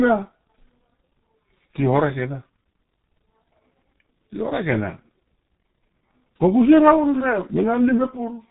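Speech, and the whole clip carries heavy G.723.1 codec damage from start to finish. Nothing gets through above about 3.8 kHz, so it's dull and boxed-in, and the voice has that hoarse, buzzy grain you get when a coder rebuilds speech from a coarse model refreshed only every 30 ms frame. Consonants smear into each other as a result. The degree of squashing fits the low-rate mode, somewhere around 6.3 kbit/s.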